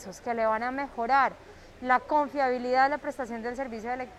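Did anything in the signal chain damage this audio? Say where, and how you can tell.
Yes, network stage: from 0.95 s to the end, treble abruptly turns synthetic with no gap, an adaptive stream at a lower bitrate, fitting a switch from 96 to 48 kbit/s.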